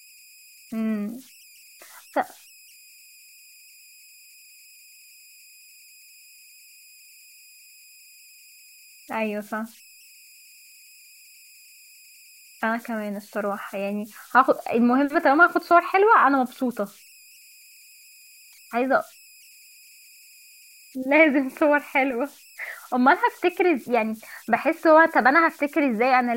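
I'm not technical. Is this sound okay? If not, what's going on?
No. A faint whistle, around 3 kHz, runs through the whole recording, clearest in the pauses, with grainy noise under quieter speech. These are converter idle tones: the recorder's converter falls into repeating patterns when the sound is very quiet. Unlike mains hum, this is high-pitched.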